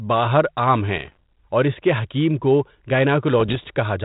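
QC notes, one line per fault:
0.97–1.16 s, bit errors on an ADPCM link: between "باہر عام" and "اور اِس کے حکیم" the sound breaks into pops and rough, gritty bursts with brief jumps in level. Under one percent of bits are flipped, but each wrong bit knocks the decoder's step size and prediction off track, so the damage rings on for milliseconds.
3.39–3.67 s, bit errors on an ADPCM link: a slightly longer run of the same pops and harsh bursts, at a somewhat lower error rate. The underlying band-limited telephone sound, which fits 32 kbit/s G.726, carries the corrupted stretches.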